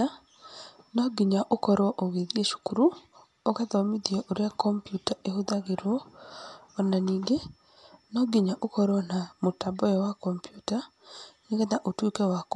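Dolby Digital compression is the likely cause of the damage heard across the whole speech clip. The audio stops dead at about 11.5 kHz, a narrowed band that fits a low bitrate around 64 kbps. Starved of bits, the encoder leaves many frequency lines without mantissa data, and the decoder fills those gaps with noise. The result is plainly audible: a dull, muffled top end with a rough, fluttering grain riding on the speech.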